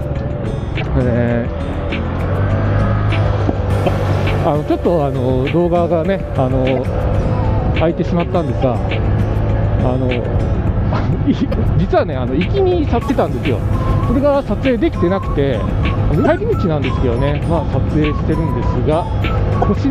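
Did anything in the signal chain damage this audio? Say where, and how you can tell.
Yes. A broken MP3 bit reservoir at the codec stage is the likely cause of the brief 30 ms glitches at 0.80, 3.85, 6.75, 8.61, 11.51, 13.08, 16.24 and 19.61 s, each about one 26 ms frame. After frames drop, the next frame reads borrowed bytes from the wrong frame, so the sound skips and garbles.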